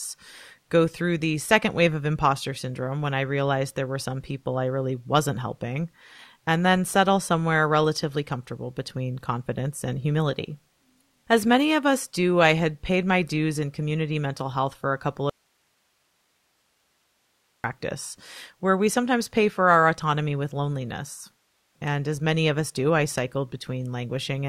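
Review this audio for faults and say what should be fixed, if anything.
Audio dropout to a faint residue, from 15.30 to 17.64 s: the speech cuts out abruptly for about 2.3 s and returns just as suddenly, with nothing left in the gap but hiss sitting about 45 dB below the normal level. Because the hiss carries on through the break, the path after the interruption stayed live, and the wanted signal most likely went missing upstream, through a momentary loss at the source connection or the capture feed. Securing cables and connectors and monitoring the input feed during recording would prevent this kind of interruption.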